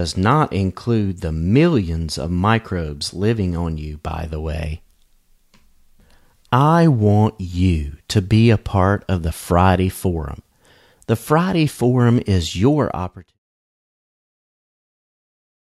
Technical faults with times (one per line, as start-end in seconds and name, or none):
none